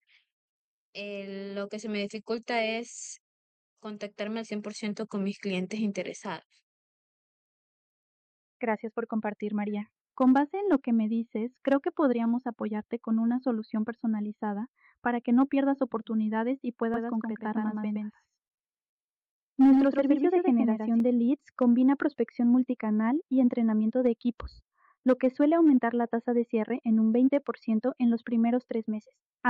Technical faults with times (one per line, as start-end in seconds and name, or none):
16.94-21.00 doubled audio track